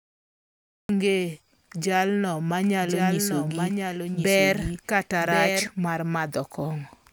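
Speech whose opening is a cut-off start: the first 0.89 s is digital silence, and then the audio jumps straight into the middle of a sound with no attack or fade-in. Unlike a quiet lead-in or a gentle fade, it is a hard edge from nothing to full level. From 2.77 s to 5.67 s there is a doubled audio track. A second full-band copy of the speech trails about a second behind and a few dB quieter. It starts and stops abruptly and carries no decay or room colour, which separates it from room echo or reverb. The likely cause is a second, slower capture path or an edit that holds two copies out of step.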